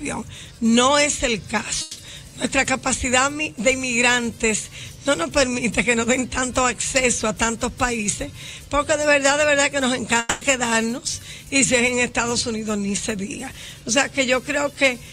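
At 1.81 to 1.99 s and 10.19 to 10.43 s the audio turns into a fading buzz or hiss, then resumes with content skipped. This is likely a long network dropout, longer than a brief packet-loss click.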